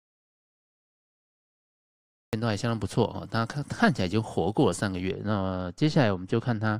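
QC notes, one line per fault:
0.00–2.33 s, audio dropout to silence. The clip opens in silence, with no room tone at all, and speech only enters at 2.33 s. The input was likely lost while the recorder kept writing silence. Anything spoken in that span is gone.
5.11–6.79 s, de-emphasis applied wrongly. From 5.11 s to the end the speech turns dull and muffled. A treble cut slopes smoothly downward, reaching about 13 dB down at 10 kHz relative to 1 kHz, as if de-emphasis were applied without matching pre-emphasis.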